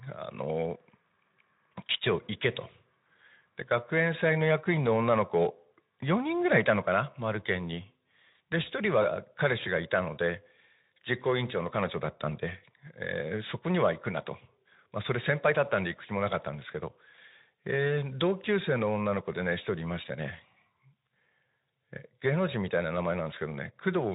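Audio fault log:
No faults found; the speech runs through a Speex path at 15 kbps, with no content above 3.8 kHz.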